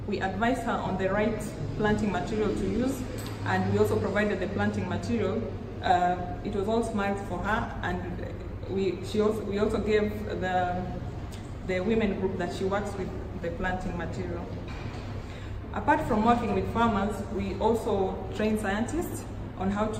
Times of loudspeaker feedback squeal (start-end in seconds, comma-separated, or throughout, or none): none